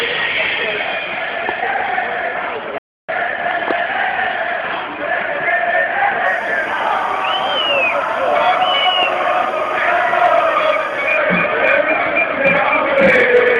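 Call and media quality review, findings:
Playback stall, 2.78 to 3.09 s: audio cuts to silence mid-flow for about 0.3 s, then resumes. Likely player buffer underrun or blocked output thread. No repeated material around the gap, unlike a network dropout with concealment.

Timecode bleed, 6.26 to 11.17 s: steady chirping warble about 25 dB under the programme, switching between tones near 1 and 2 kHz at a 24 frames/s rhythm. Linear timecode crosstalk from an adjacent track or cable. The rhythmic two-tone pattern rules out a steady hum or whine.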